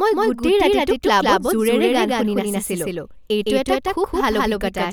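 From start to end, the speech carries a doubled audio track: a second, full-band copy of the same signal trails the original by roughly 150 ms at about the same loudness. Each syllable is followed by a clean repeat with no decay or room colouring, producing a flat, slapback-like smear. The likely cause is the same signal arriving twice, once through a slower capture path or through an edit that left two copies out of alignment.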